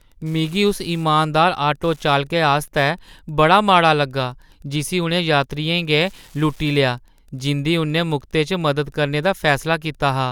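A nearby Wi-Fi radio is coupling into the audio circuit, which rectifies its beacon transmissions every 102.4 ms. Throughout the speech this Wi-Fi interference sits as a faint, steady ticking close to ten times a second, roughly 40 dB below the signal.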